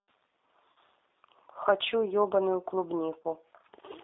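A speech recording carried over a G.729 codec line. The whole clip sits inside a narrow telephone band, roughly 300 Hz to 3.7 kHz, with nothing above. The codec rebuilds the voice from a filter model and a few pulses per frame, so it sounds rough and slightly synthetic. The damage is plainly audible and fits a G.729A stream at 8 kbit/s. VoIP packet loss concealed by the speech codec occurs twice. From 0.72 to 0.76 s, about 40 ms of audio is missing, which fits two lost packets. The decoder repeats its last pitch and filter at falling gain, so the sound smears into a fading buzzy tone or coloured noise. At 3.22 to 3.26 s a shorter gap of about 20 ms, which fits one lost packet, gets the same treatment. Because each frame builds on the previous one, the voice stays weak or distorted briefly after both gaps.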